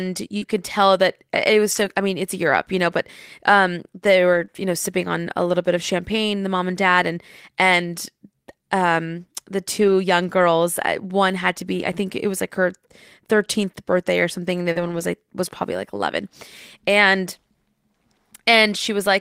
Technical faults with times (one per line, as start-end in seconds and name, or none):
0.37-0.43 short concealed packet loss
0.41-0.43 lost packet rebuilt from error correction
1.71-1.85 lost packet rebuilt from error correction
4.33-4.43 lost packet rebuilt from error correction
4.45-4.50 short concealed packet loss
9.80-9.94 lost packet rebuilt from error correction
14.72-14.77 short concealed packet loss
14.75-15.01 lost packet rebuilt from error correction